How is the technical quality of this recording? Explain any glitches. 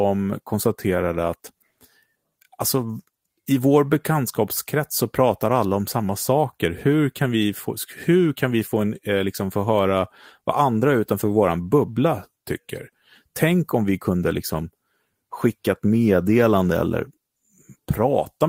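No glitches or faults heard.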